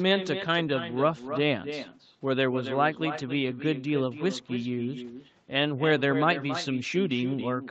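Echo with no canceller runs throughout this speech recording: every phrase is trailed, roughly a third of a second later, by a quieter copy about 10 dB down that sounds thinner than the direct voice. The far end is playing the call through a loudspeaker, its microphone picks that playback up, and nothing subtracts it, so the talker's own voice returns after the network round trip. The call's microphone processing is also audible, with nothing above 8 kHz.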